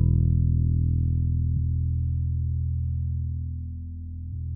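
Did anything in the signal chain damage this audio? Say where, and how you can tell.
Yes. Damaged data in the compressed stream, at the codec stage, makes short glitches at 1.56 and 4.32 s. Each shows as a thin broadband spectrogram streak where corrupted frames were misdecoded.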